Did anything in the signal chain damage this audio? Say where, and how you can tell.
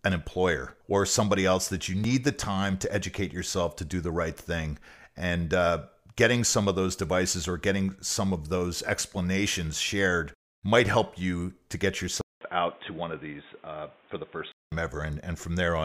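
Yes. At the capture stage the input was likely switched to a poorer device. After a 200 ms gap at 12.21 s, the speech loses everything above 3.8 kHz until 14.72 s. It sounds dull and boxy over new background noise roughly 30 dB down, at unchanged level.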